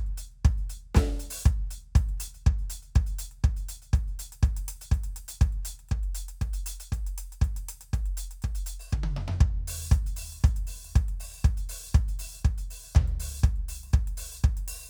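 Nothing goes wrong anywhere in this music; there's no technical fault to point to at any moment.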